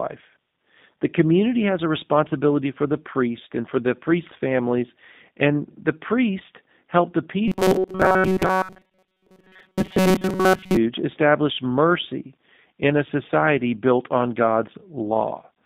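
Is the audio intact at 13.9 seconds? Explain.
No. At 13.9 seconds the speech sounds narrow, rough and faintly synthetic, with nothing above about 3.7 kHz and little below 150 Hz. That damage runs through the whole clip and is plainly audible. It is G.729 codec coding, which fits an 8 kbit/s G.729A link. The codec rebuilds each 10 ms frame from a vocal tract filter, a pitch predictor and a few pulses, which leaves the speech sounding buzzy and artificial.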